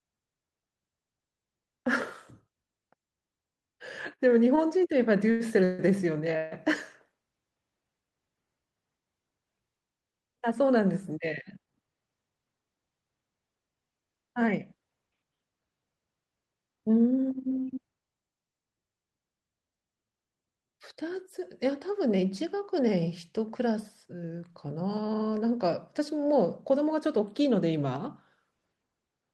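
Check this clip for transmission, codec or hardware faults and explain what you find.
Two kinds of network fault are audible in the speech: a run of stalls early on, and two stretches where the receiver sped the audio up. The Opus call path cuts off the highs at about 12 kHz, which fits a bitrate of around 24 kbps.

Repeated stalls (stutter), 4.15 s to 6.53 s: packets kept arriving late, so the jitter buffer ran dry five times. Each time the receiver stretched out the last sound until new audio came, filling about 427 ms, roughly 18% of that span. The longest gap was 148 ms. Nothing is lost, but the speech halts and drags in short, repeated hitches.

Jitter buffer speed-up, 16.55 s to 17.51 s and 21.71 s to 22.54 s: the buffer held more audio than it needed. To cut the delay, the receiver removed short pitch-period pieces again and again. About 150 ms was removed in the first stretch, which runs at 114% speed. 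About 50 ms was removed in the second, at 106%. The pitch stays the same, but the speech sounds rushed, most clearly in the first stretch.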